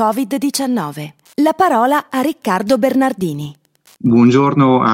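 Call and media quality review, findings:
Wi-Fi interference, 0.82–4.55 s: steady ticking every 102.4 ms, about 40 dB under the speech. A nearby Wi-Fi radio's beacon is getting rectified in the audio circuit.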